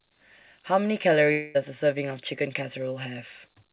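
A long network dropout runs from 1.32 to 1.56 s, likely caused by a stretch of packets that never reached the receiver. For about 0.22 s the speech stops and is replaced by a synthetic continuation of the last sound, a buzzy tone that fades rather than dropping to silence, since the concealment fills the whole gap. Speech then resumes with that portion missing, over a band that stops at 4 kHz, as G.711 A-law at 64 kbps allows.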